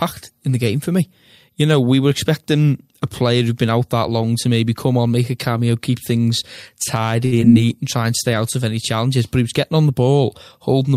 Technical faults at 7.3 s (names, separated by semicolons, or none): short stall from a late packet